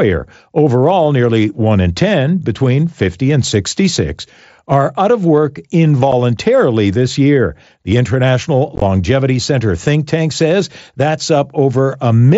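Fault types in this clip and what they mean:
Unconcealed Bluetooth headset packet loss: dropped headset packets leave hard-edged silent holes, not smoothed-over repeats, at 6.12 s after "are out of work" and a chopped patch around 8.8 s.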